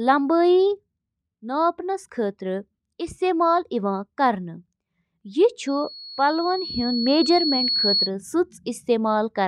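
From 5.67 s to 8.11 s a loudspeaker feedback squeal builds over roughly two seconds into a steady 4.4 kHz tone that reaches about the level of the speech. A loudspeaker's sound re-entering the microphone with loop gain above one causes it. Its slow self-sustaining swell at one pitch sets it apart from a brief electrical whine.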